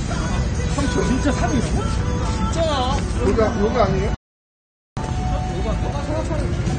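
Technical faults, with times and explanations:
Throughout: AAC compression. The encoder likely ran AAC-LC at a low bitrate, around 32 kbps judging by the damage. Nothing survives above 9 kHz, so the sound is dull, and coarse quantisation leaves plainly audible smearing with a warbling, fizzy texture on sustained parts.
4.15–4.97 s: audio dropout to silence. The input was likely lost for about 0.82 s while the recorder kept writing silence. The sound cuts off abruptly into dead silence with no background tone, then resumes mid-flow, and whatever occurred in that gap is missing.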